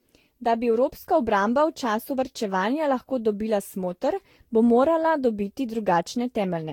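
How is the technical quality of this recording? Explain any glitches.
The speech is noticeably degraded throughout. Generation loss, likely from around ten Vorbis passes near 70 kbit/s, makes it swirly, hollow and blurred, with nothing above 17.9 kHz; a single encode wouldn't smear it this badly.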